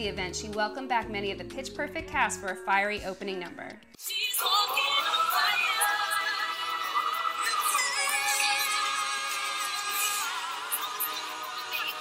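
No technical faults can be heard anywhere in the recording.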